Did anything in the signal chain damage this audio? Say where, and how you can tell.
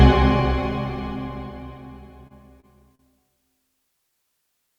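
Yes, at the network stage: short stalls from late packets at 2.27, 2.60 and 2.95 s. Sound briefly holds for 29 to 38 ms while the jitter buffer waits, then resumes.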